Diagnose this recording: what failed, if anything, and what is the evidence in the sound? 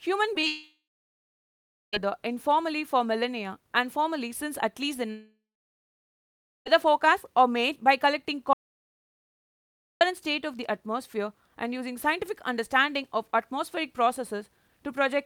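Network stage, short concealed packet loss: two packets of about 20 ms each arrived too late for the decoder, at 0.33 to 0.37 s and again at 0.41 to 0.45 s. The receiver bridged each hole by extending the preceding speech, drawing on its pitch or on shaped noise, then crossfading into the next real packet. What you hear is two quick smears or wobbles a few hundredths of a second apart, where a brief consonant can disappear.

Long network dropout, likely a stall in the packet stream, at 0.47 to 1.95 s and 5.11 to 6.68 s. Each time roughly 1.5 s of speech never arrived. The decoder first kept the last sound going as a fading buzz or hiss for a few tenths of a second. After that, only silence or low steady noise remained, for about 1.1 s in the first gap and 1.25 s in the second. Speech then resumes further on, with the missing stretch simply gone.

Audio dropout to silence at 8.53 to 10.01 s, about 1.48 s, points to the capture or encoder side losing its input, such as a disconnected device, failed link or stray mute, while it continued writing silence. 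Unlike the network gaps, nothing bridges this one. The speech cuts off mid-flow into silence with no room tone at all, then snaps back, and whatever was said during that stretch is missing.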